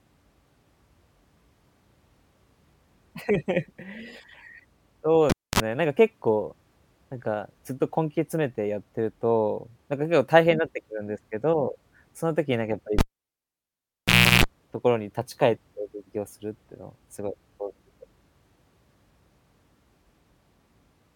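At 5.30 s the cable is pulled and plugged in: a pop, about 0.25 s of near silence, 46 ms of 50 Hz mains buzz as the tip makes contact, then a second pop. At 12.99 s it recurs, with 1.40 s unplugged and 338 ms of 60 Hz buzz before the speech returns at 14.44 s.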